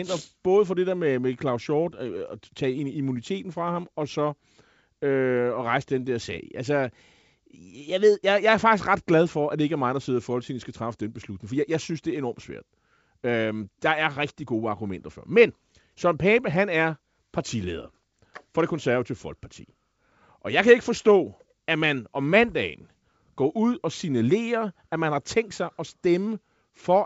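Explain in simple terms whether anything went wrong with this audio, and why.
Nothing went wrong with this speech recording.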